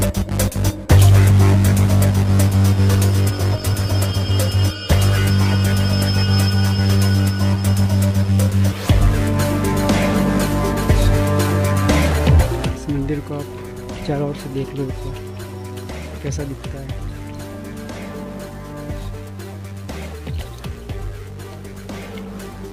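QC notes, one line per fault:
18.09–22.72 s sample clock jitter: timing wobble of around 10 µs adds hiss roughly 25 dB under the signal; spectrogram shows broadband haze riding loud, steep transients.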